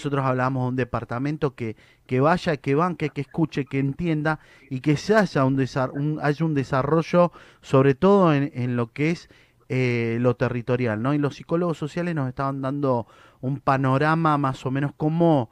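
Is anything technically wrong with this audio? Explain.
No, nothing technically wrong can be heard here.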